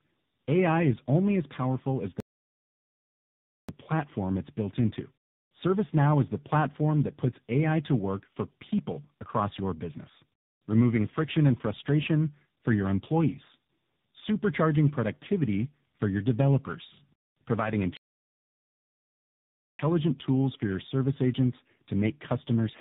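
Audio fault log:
throughout: tandem speech coding. The speech is rough, muffled and warbly. The harshness suggests two speech codecs in a row, an ADPCM stage like G.726 feeding low-rate AMR-NB, with a G.711 A-law link between. Each coder re-encodes the previous one's errors, so the artefacts are heavier than any single codec's band-limited sound.
2.20–3.69 s and 17.97–19.79 s: playback stall. The sound stops mid-flow into full silence for 1.48 s and then 1.82 s before continuing, likely because the player ran short of data or its thread was blocked. These are long, clean silences, not the brief clicks or smeared fills of packet loss.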